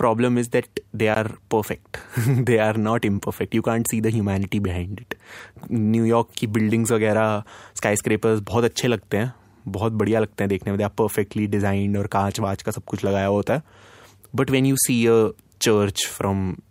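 A gap at a join of encoded pieces falls at 1.15 s, right after "is that they": separately encoded speech segments were spliced without trimming encoder delay and end padding, leaving a gap of about 17 ms before the sound resumes exactly where it broke off.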